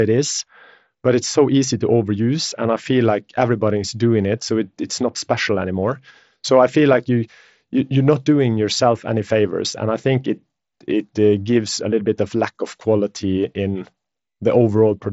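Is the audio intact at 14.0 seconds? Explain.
Yes, the audio is intact at 14.0 seconds, carrying the band-limited sound of the Bluetooth mSBC headset codec with nothing above about 7.7 kHz.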